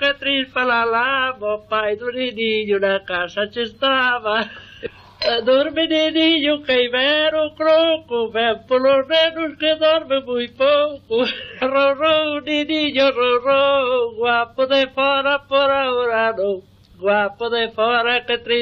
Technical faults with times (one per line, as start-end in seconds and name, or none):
7.30 compressed frames skipped